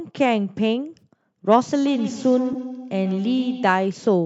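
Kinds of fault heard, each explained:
AAC frame loss with concealment: Two brief smeared, noisy patches at about 0.99 s and 2.53 s, each covering roughly 20 ms of audio, which fits two lost codec frames. The decoder filled each gap by reusing the last good spectrum.
Feedback echo between two devices: From 1.74 s to 3.89 s the sound returns roughly every 150 ms, thinner and ringing, at most about 10 dB below the speech. A second device in the room replays the audio, and the first device's microphone picks it up and sends it round again.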